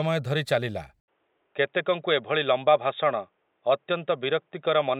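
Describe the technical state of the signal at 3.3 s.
At 3.3 s the speech is dull and band-limited, with nothing above 3.8 kHz, as it has been since an 80 ms gap at 1.0 s, likely an input switched to a poorer device. Unlike a plain filter, it brings its own faint noise floor, roughly 50 dB down, at unchanged level.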